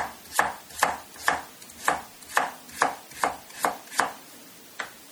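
Right through the clip there's a plainly audible watery, swirly smear with metallic chirps, likely MP3 compression running short of bits, consistent with a 48 kbps encode.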